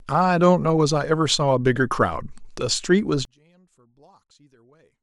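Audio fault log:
3.25–5.03 s, one channel inverted: speech drops about 35 dB to a faint residue, not silence, likely from reversed polarity cancelling the shared centre in mono.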